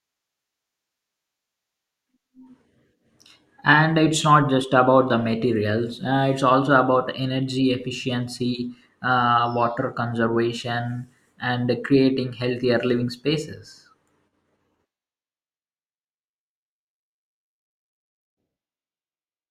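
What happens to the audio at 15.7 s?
At 15.7 s the speech plays through cleanly, with no dropout, click, distortion or other fault to be heard at that moment.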